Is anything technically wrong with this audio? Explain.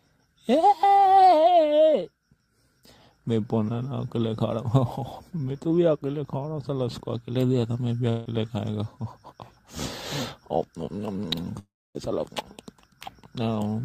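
Yes. Two long network dropouts, at 8.09 to 8.27 s and 11.59 to 11.97 s, likely lost packets. A fading buzz fills each gap. The second ends in silence.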